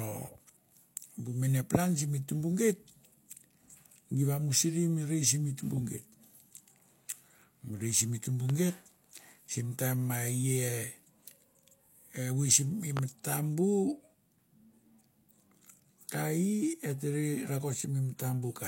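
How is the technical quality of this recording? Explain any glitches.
Two loud pops break into the speech, at 8.50 to 8.53 s and again at 12.97 to 13.00 s, each a single sharp burst lasting a few hundredths of a second. They are likely caused by a sudden voltage step, such as static, a connector or a driver glitch, whose pulse the downstream circuits reshape. The first peaks around 10 dB above the speech and the second around 15 dB, and the speech continues underneath both.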